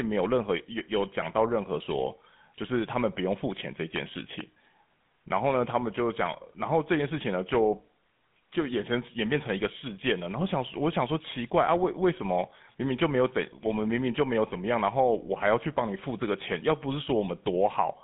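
From start to finish the speech carries the GSM full-rate codec's signature: a buzzy, gravelly roughness from the coarse pulse excitation, plainly audible, squeezed into roughly 150 Hz to 3.6 kHz with nothing above 3.8 kHz. That fits the old 13 kbps phone codec.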